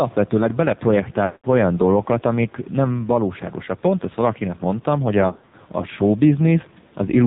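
Gain pumping runs throughout: the quiet room noise, about 35 dB below the speech, swells in the pauses and ducks by roughly 5 dB under each loud syllable, likely from a fast limiter or compressor pulling down excessive input gain. Heavy AMR narrowband mobile codec damage is also constant. Nothing above 4 kHz survives, and the voice sounds buzzy and synthetic, which points to a very low bitrate around 6 kbps. Lost AMR speech frames break the speech from 1.26 to 1.46 s. The decoder repeats its last pitch and vocal-tract settings at falling gain, so the sound smears and fades out for about 180 ms. Frames are lost again from 5.28 to 5.55 s, this time scattered across about 240 ms, with runs of up to 60 ms, causing brief stuttering dips and warbles.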